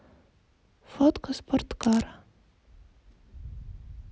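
A short speech recording with a burst of cable scratch noise from 1.83 to 2.02 s, roughly a fifth of a second of dense, ragged crackle laid over the speech at about 10 dB below it. The uneven, gritty texture points to a worn cable, connector or control being moved, its contact resistance jumping rapidly and modulating the signal path.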